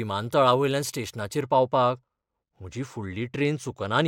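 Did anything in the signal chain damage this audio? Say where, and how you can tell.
Yes. Channel delay with comb filtering starts at 1.41 s and runs to the end of the speech. One channel arrives a couple of samples late, a few hundredths of a millisecond, and the two are then summed to mono, which points to a misaligned converter or driver stage. Such a short offset puts the first cancellation notch high, around 10 kHz, so the top end dulls exactly where the change begins.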